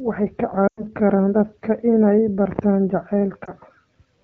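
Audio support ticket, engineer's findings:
Lost AMR speech frames, 0.67–0.85 s. Speech drops to near silence within two frames. About 100 ms missing, fitting five consecutive 20 ms frames failing checksum. Decoder repeats last pitch and vocal tract parameters at falling gain. Recovery briefly weak.

Lost AMR speech frames, 3.45–3.52 s. Short dip or warble, consistent with a single concealed frame.

AMR-WB at 12.65 kbit/s carries the rest, with light coding texture. Wideband concealment fades quickly.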